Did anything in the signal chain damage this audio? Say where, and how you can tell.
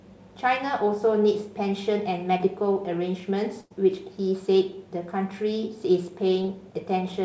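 Yes. Short concealed packet loss at 2.38–2.41 s and 6.42–6.46 s is a network fault. About 20 ms of speech never reached the decoder in time. The receiver patched roughly 15 ms by extending the preceding sound, then crossfaded back, leaving a brief smear or wobble in each spot.

A burst of packet loss at 3.61–3.72 s also comes from the network. About 100 ms in a row went missing. The decoder stretched the last sound for about 90 ms, fading it out, so a held buzz or hiss replaces real speech before it picks up further on. The band stops at 8 kHz, which fits a G.722 call codec.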